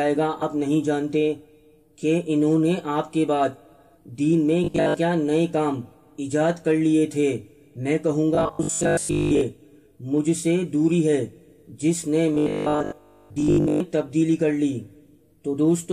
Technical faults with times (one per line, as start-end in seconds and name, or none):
0.41 compressed frames skipped
4.64-4.94 robotic sound from repeated short buffers
8.35-9.41 robotic sound from repeated short buffers
12.34-13.80 robotic sound from repeated short buffers